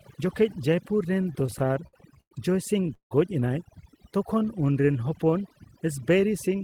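The whole speech clip carries overdone noise removal: the suppressor was set so hard that it shuts off any frequency band sitting near its noise estimate. The background drops and breaks up into little twinkling specks.

From 1.23 to 2.32 s there are repeated stalls (stutter). Packets kept showing up late, so the jitter buffer ran dry 13 times and the receiver stretched the last sound to cover each wait. That adds 277 ms of filler, the longest wait 104 ms, and nothing is lost. It drags and stutters.

At 2.94 to 3.12 s there's a call audio freeze. The sound hangs for about 163 ms, with roughly 100 ms of that fading to silence, then picks up exactly where it stopped with nothing skipped. Packets were likely held up and the jitter buffer emptied.

Then from 3.90 to 5.60 s comes a jitter buffer slow-down. The receiver was rebuilding its reserve by repeating single pitch periods and bits of pauses. 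That adds about 198 ms and plays at 89% speed at the same pitch, so sounds get drawn out.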